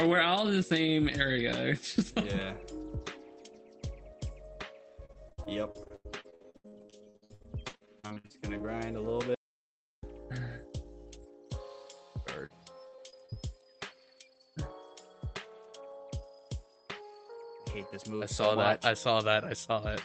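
Repeated packet loss (robotic sound) runs from 5.05 to 8.62 s. Dozens of short holes, the longest about 87 ms, were each patched by stretching the preceding sound, covering roughly a third of the span, so the audio turns choppy, with pieces missing.

An audio dropout to silence follows from 9.35 to 10.03 s. The sound stops abruptly and leaves 0.68 s of dead digital silence with no room tone, likely because the input was lost while silence kept being written. Everything in that gap is gone.

A short concealed packet loss appears at 12.46 to 12.52 s. About 40 ms never arrived in time, and the receiver filled it by extending the last sound before blending back. It is heard as a brief smear or wobble.

Repeated packet loss returns from 12.88 to 13.38 s. Several gaps of up to 40 ms, concealed across about 28% of that half-second, bring back the same choppy, broken texture, here through an Opus call path that keeps the upper band limited to around 8 kHz.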